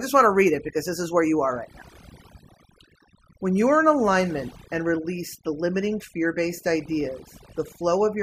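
Overdone noise removal runs through the whole of this speech clip. A noise reduction stage was pushed far too hard on a noisy recording, so any frequency band sitting close to its noise estimate gets pulled down or cut out entirely, taking the softer parts of the voice along with the noise. Between phrases the background collapses into near silence speckled with twinkling, chirpy fragments.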